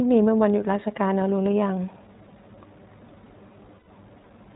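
Speech that sounds clear but slightly rough and synthetic, with everything above 4 kHz missing, is the mark of the iLBC codec. It is a narrowband VoIP coder that handles each short frame independently, here consistent with 20 ms frames at around 15.2 kbps. From 3.78 to 3.90 s the sound turns into a held, faintly buzzy vowel, then recovers at once. These are lost iLBC frames: the decoder repeated the last pitch cycle blended with noise across a gap of roughly 100 ms, which fits five missing 20 ms frames.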